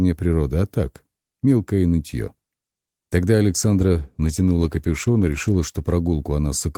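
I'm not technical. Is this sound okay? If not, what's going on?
No, not entirely. From about 3.52 s to 6.01 s there's a call bitrate drop. The connection seemed to get squeezed, so the call software started sending much less detail to keep things flowing. For roughly 2.4 seconds the sound gets rougher and duller, a bit watery, like the crisp top end has been shaved off. Once the connection recovers the detail comes back, but through that stretch it's degraded.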